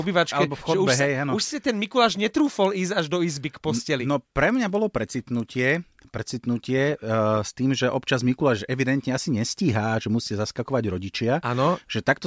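A speech recording with a resampler restarted on every block between 1.45 and 5.85 s, ending just before "precitnutie uh s tým". Throughout that span a 20 Hz tick train rides on the voice, one tick per 50 ms block. Each block was converted in isolation, consistent with a 48 kHz to 16 kHz conversion, so the filter at each block edge lacked the true neighbouring samples and left a small discontinuity there. The ticks follow the signal, dropping away in pauses.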